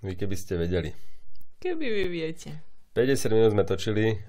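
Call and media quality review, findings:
Gap between stream segments at 2.04 s in the speech. Symptom: hard-edged dropout of about 9 ms, pure silence. Component: segment packaging or player timeline. Mechanism: timestamps at the 4 s segment boundary leave a hole, so the player inserts silence. Nothing missing, just a short pause added.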